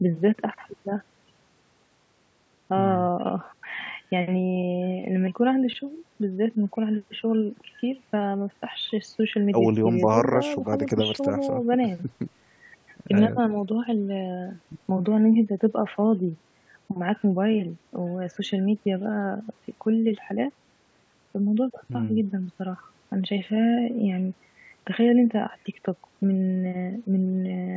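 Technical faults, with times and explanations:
No technical faults found; the speech shows only the expected call microphone processing, with the lowest bass trimmed by its high-pass filter and no content above 8 kHz.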